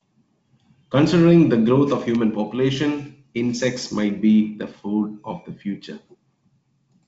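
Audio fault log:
No faults heard in this speech, which comes over the G.722 wideband telephone path at 64 kbit/s with bandwidth up to about 7 kHz.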